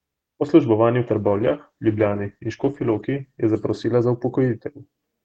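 At 1.05 s, right after "službovanju v", a call bitrate drop sets in: highs vanish and the sound turns rough and muffled, consistent with a fall from about 64 to 13 kbps, lasting to the end.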